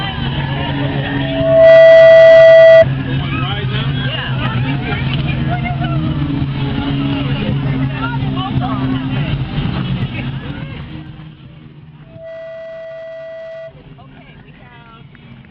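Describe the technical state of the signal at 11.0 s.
Zipper noise spans 9.98 to 11.57 s. The level drops in unsmoothed steps of about 1 dB, roughly fifteen a second. Each step clicks audibly.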